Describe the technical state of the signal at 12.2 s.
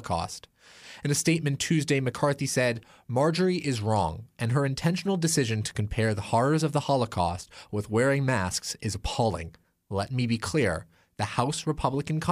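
At 12.2 s the speech signal is intact, with no audible dropout, distortion or other technical fault.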